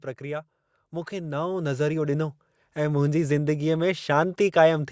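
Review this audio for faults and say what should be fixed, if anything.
Automatic gain rising runs from 0.2 s to 4.48 s: the gain control judged the input too quiet and kept raising its level, lifting the speech and the background together by about 10 dB. On a waveform the envelope widens steadily across those four seconds, and a spectrogram brightens uniformly, noise floor included, beneath the 8 kHz ceiling left by the call's microphone processing. Set the input level correctly at the source so the gain control has nothing to correct.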